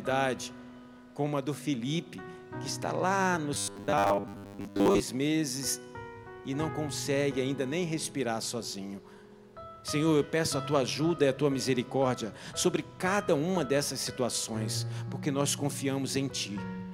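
From 3.54 to 5.00 s the sound turns into a rigid, metallic buzz at 100 Hz. This is robotic sound from repeated short buffers, likely caused by late-arriving audio being covered by looping the last 10 ms segment, repeated for roughly 70% of that stretch.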